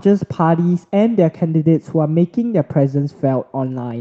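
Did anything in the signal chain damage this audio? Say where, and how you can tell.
No, nothing in the signal chain damaged this speech.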